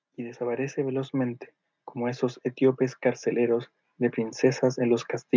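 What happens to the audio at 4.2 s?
At 4.2 s the automatic gain control is still partway through a slow climb. It judged the input too quiet and has been pushing its gain up steadily from 0.16 s until 5.15 s, by about 12 dB in all. The speech and the background noise therefore swell together, with no sudden jump, as if the whole sound were creeping closer. The call microphone processing's limit of nothing above 8 kHz stays constant throughout the climb.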